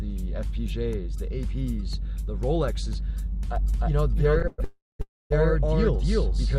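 From 3.56 s to the end a doubled audio track appears: an equally loud copy about 300 ms behind, likely from a second, slower capture path, visible as repeated waveform shapes with abrupt onset. Three call audio freezes follow, at 4.47–4.60 s, 4.64–5.01 s and 5.01–5.32 s, likely from delayed packets draining the jitter buffer. Each fills 109, 350 and 290 ms with a fading buzz or hiss, the latter two ending in 190 and 230 ms of silence. On a spectrogram these show as smeared horizontal streaks and then blank gaps, after which the sound resumes later with nothing missing.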